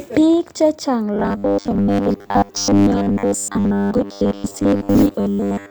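From 1.14 s to 5.70 s the speech turns into a rigid, metallic buzz at 100 Hz: robotic sound from repeated short buffers, likely caused by about 10 ms of audio being looped in place of most of the signal. Unlike mains hum, the buzz replaces content rather than sitting beneath it.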